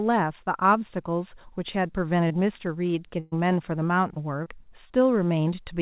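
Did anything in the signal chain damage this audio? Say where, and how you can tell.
Yes, and it's the network stage. Short concealed packet loss shows up at 2.28 to 2.32, 4.14 to 4.18, 4.44 to 4.48 and 4.88 to 4.92 s: brief smears or wobbles where about 20 ms of speech, likely one packet each, never arrived and the decoder stretched the previous sound over the hole.

At 3.20 to 3.34 s there's a burst of packet loss. About 120 ms went missing, and the receiver bridged it with a fading continuation of the last sound rather than silence, so you get a held buzz or hiss before the speech jumps ahead. This happens over a call path whose band stops at 4 kHz, which points to G.711 A-law.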